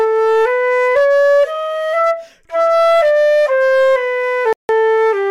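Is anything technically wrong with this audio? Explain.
Yes, two faults can be heard.

Hard clipping runs through the whole clip. A stage in the chain was driven about 3 dB past what it can pass, so roughly one sample in twenty is sliced flat at the limit. Those squared-off peaks add high harmonics, heard as a crackly edge on the louder moments.

A gap from 4.53 to 4.69 s, about 160 ms of silence, is most likely a Bluetooth stall. Interference delayed the wireless packets, the headphone buffer emptied, and playback halted until the data arrived. The sound drops out abruptly and then resumes.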